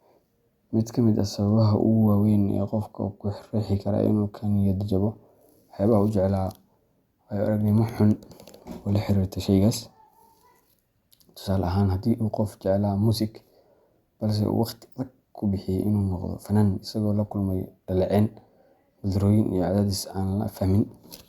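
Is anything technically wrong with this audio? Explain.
No, nothing is technically wrong with this audio.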